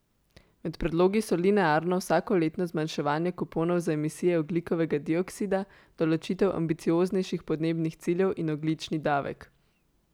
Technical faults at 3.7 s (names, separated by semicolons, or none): none